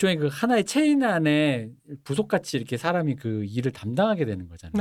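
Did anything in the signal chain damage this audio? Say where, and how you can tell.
No, nothing in the signal chain damaged this audio.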